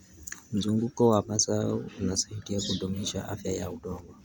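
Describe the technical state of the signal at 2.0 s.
At 2.0 s, as across the whole clip, the audio likely passed through Bluetooth LC3 compression. The transform codec works in short frames, around 10 ms here, at a rate that fits roughly 48 kbps, spending too few bits on the upper spectrum and filling the gaps with synthetic noise. The speech carries a plainly audible breathy, grainy edge on its higher frequencies, while the band itself reaches up to about 20.2 kHz.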